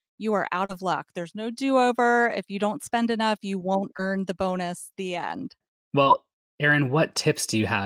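Short concealed packet loss occurs three times, at 0.65–0.71 s, 3.97–4.00 s and 6.02–6.08 s. About 40, 20 and 40 ms of speech arrived too late, and the decoder extended the preceding sound before blending back, leaving a brief smear or wobble.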